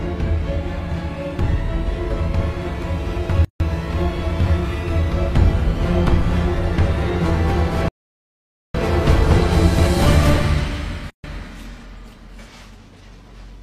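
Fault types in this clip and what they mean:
gap at a join of encoded pieces: The sound cuts to silence twice, for about 154 ms at 3.45 to 3.60 s and about 139 ms at 11.10 to 11.24 s. The edges are smeared by the codec, and the sound picks up exactly where it left off. The pieces were encoded separately and joined without trimming, so each encoder's leading delay and its padded final frame stayed in as silence at the seam.
playback stall: The sound stops in mid-flow at 7.88 s and stays silent until 8.75 s, a dropout of about 860 ms. That is far longer than the two seam gaps and is clearly noticeable as a halt before the audio resumes. The likely cause is the player running out of buffered data, or its output thread being blocked, so nothing reached the output until playback recovered.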